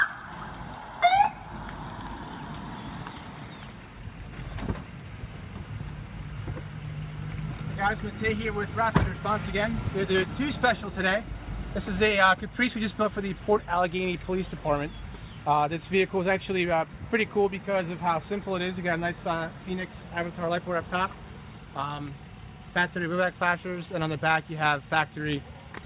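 No faults are present; the audio has the narrowband character of a call path, with nothing above about 4 kHz, which fits a G.711-style telephone codec.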